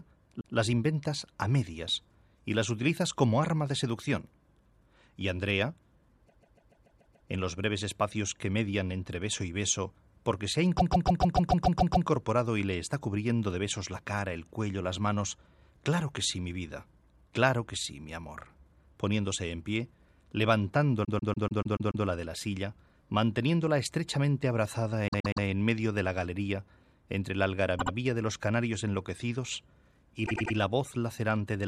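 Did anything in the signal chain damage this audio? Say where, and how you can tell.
Yes: repeated frames, at the codec or storage stage. Blocks of about 144 ms stutter at 0.40, 6.28, 10.77 and 21.04 s, with shorter 72 to 120 ms loops at 25.07, 27.78 and 30.25 s. Unlike a buffer underrun, nothing drops out: whole compressed blocks replay, lengthening the audio.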